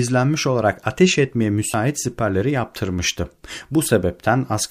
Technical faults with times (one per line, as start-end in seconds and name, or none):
0.83 dropped buffer (overrun)
1.74 dropped buffer (overrun)